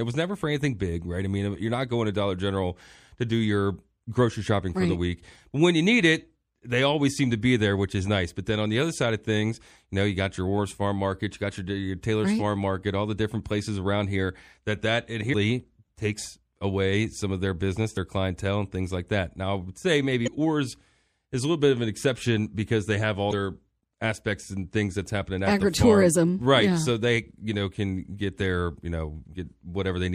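Throughout the speech the sound is watery and swirly, with dulled treble and metallic, chirpy s sounds. This is likely MP3 compression at a low bitrate, one that fits roughly 64 kbps: the encoder cuts the high end and drops weak frequency lines that flicker between frames.

Short chirps or squawks break in at 15.32 s, 17.94 to 17.98 s, 20.23 to 20.28 s and 23.29 to 23.33 s. These are damaged data in the compressed stream. The decoder misreads the corrupted frames, loses sync and skips ahead to the next valid frame header.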